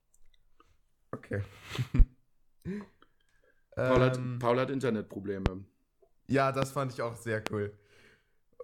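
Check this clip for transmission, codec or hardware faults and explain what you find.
One hardware fault recurs. Loud pop, at 1.99–2.03, 3.97–4.00, 5.46–5.50, 6.62–6.66 and 7.47–7.50 s: each is likely a sudden voltage pulse from a switch, static or driver glitch, added to the signal. Each is heard as a single sharp pop about 15 to 25 dB above the speech, which carries on underneath.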